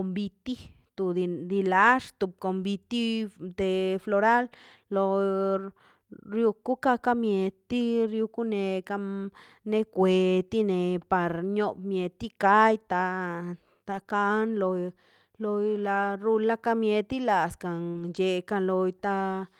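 Speech, with two kinds of network damage. Lost packets rebuilt from error correction occur at 2.57–2.63 s, at 5.57 s, at 13.91–14.01 s and at 17.95–18.17 s. Each stretch plays back as a rougher, noisier version of the voice rather than a gap, because the decoder used the low-bitrate copy carried in the following packet. The longest, about 120 ms near the end, fits six lost packets. On a spectrogram the rebuilt frames look grainier. The waveform stays continuous with no dropout. Short concealed packet loss falls at 14.03–14.07 s, just after the third rebuilt stretch, and at 17.91–17.97 s, overlapping the start of the last one. In these spots the audio never arrived, so the receiver extended the preceding sound, either its pitch or shaped noise, and then crossfaded back. This is heard as a brief smear or wobble.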